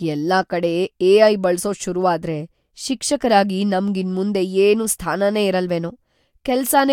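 Nothing technical goes wrong anywhere in this speech recording, so there's no fault to point to at any moment.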